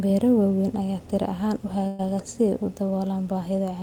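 At 1.87 s the speech hits a burst of packet loss lasting until 2.01 s. Several packets never arrived in time. The receiver stretched the last sound across about 113 ms, fading it into a held buzz or hiss. Then the speech resumes, with about 120 ms gone.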